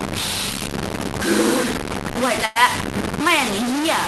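Low bit depth without dither runs through the whole of this speech clip: every sound carries a harsh, grainy distortion that rises and falls with the signal itself, roughly as loud as the speech, and the quietest passages break up into sputtering steps rather than a smooth fade. The likely cause is truncation to very few levels, consistent with about 4 bits, with no dither to turn the error into steady hiss. A burst of packet loss follows at 2.45 to 2.57 s: about 100 ms of audio is missing, and the receiver bridges it by stretching and fading the last sound it had, heard as a brief held buzz or dying hiss, before the speech picks up again further along with that stretch gone. Both faults sit on top of an Opus call path whose top end stops around 12 kHz.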